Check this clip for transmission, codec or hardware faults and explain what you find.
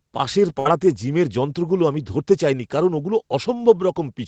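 One transmission fault can be heard in this speech clip, which comes through a call path whose sound stops at about 8 kHz, as a wideband Opus call would.

A burst of packet loss occurs from 0.59 to 0.67 s. Consecutive packets failed to arrive in time, so the receiver stretched the last sound for about 59 ms, fading it into a held buzz or hiss. The speech then resumes with roughly 60 ms missing.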